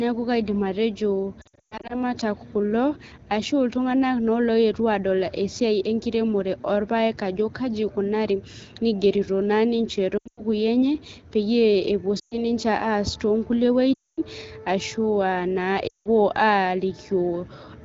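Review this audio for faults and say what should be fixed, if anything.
Lost AMR speech frames occur at 1.41–2.03, 10.17–10.41, 12.19–12.36, 13.94–14.21 and 15.87–16.08 s. The decoder held the last pitch and vocal tract shape at falling gain, so speech smears and fades. The spectrogram shows frozen, blurred harmonics dimming toward silence, and the waveform shows tapering envelope dips. Stronger radio error protection or a more robust channel would prevent these losses.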